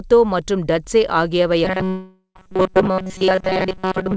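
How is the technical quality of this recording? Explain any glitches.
Two glitches later in this speech clip, both starting right after "மற்றும் டட்ஸே ஆகியவை". The audio reached us over a WebRTC call path using G.722, so nothing sits above 8 kHz.

From 1.65 s to the end, there's robotic sound from repeated short buffers. Most of the audio becomes a rigid metallic buzz at 188 Hz, likely from a player looping a tiny chunk, which fits a buffer of roughly 5.3 ms, because fresh audio kept arriving late.

From 1.88 to 2.37 s, there's a long network dropout. About 0.48 s of audio is simply lost. The receiver bridges the gap with a fading continuation of the last sound, likely because packets stopped arriving, leaving around 0.11 s of near-silence before the audio resumes.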